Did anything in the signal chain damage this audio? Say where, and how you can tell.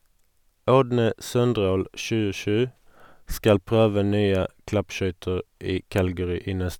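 No, nothing in the signal chain damaged this audio.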